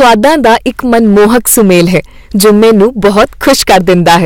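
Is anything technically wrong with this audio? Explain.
Yes. Hard clipping runs throughout this speech. The level is pushed about 18 dB past what the chain can pass, so roughly a sixth of samples hit the ceiling and are sliced flat. That gives a harsh, buzzy fuzz on every loud syllable, with abrupt, crackly edges rather than the rounded, warmer thickening of soft saturation.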